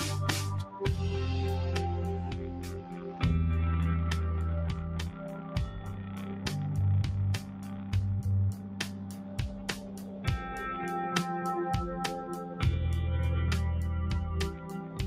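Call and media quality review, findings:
Noise suppressor applied to music or sounds, throughout: speech-tuned suppressor pumping steady content, level swings around 10 dB; attacks mostly pass, unlike a compressor, which would duck them too.

Sound cut by the noise suppressor at 2.31–2.98, 5.10–5.55, 5.79–6.47, 7.39–7.93, 8.53–10.26, 14.56–14.99 s: held sound and tails sink about 5 dB or decay cut short.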